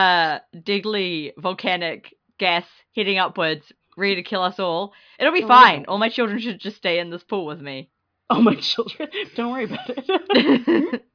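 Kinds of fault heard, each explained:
No technical faults can be heard anywhere in the recording, so there are no kinds of fault to explain.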